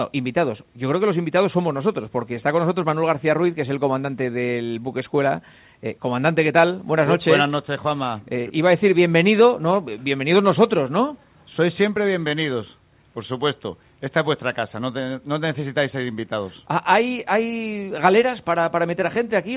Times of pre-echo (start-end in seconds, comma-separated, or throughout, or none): none